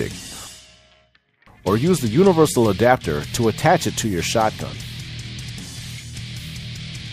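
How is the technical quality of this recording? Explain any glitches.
No glitches can be heard anywhere in this recording. There is nothing in the audio that calls for an explanation.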